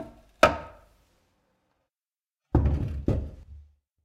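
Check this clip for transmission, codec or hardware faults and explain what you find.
Nothing wrong can be heard anywhere in this audio.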